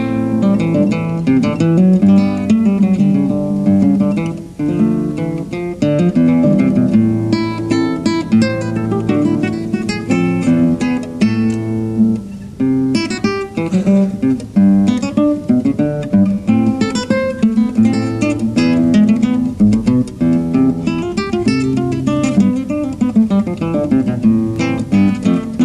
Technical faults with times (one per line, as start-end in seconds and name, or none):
none